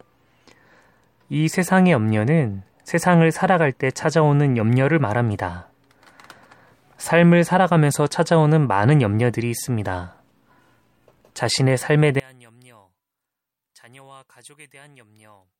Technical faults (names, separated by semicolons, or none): one channel inverted